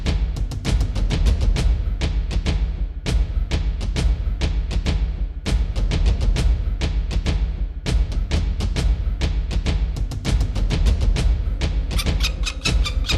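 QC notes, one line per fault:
No technical faults are audible anywhere in the signal.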